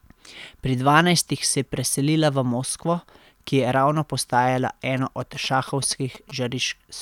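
From 4.97 to 6.31 s, after "ki je ravno postajala", GSM signalling bursts appear. A nearby phone's rectified radio bursts gallop as short 217 Hz buzzes, well below the speech.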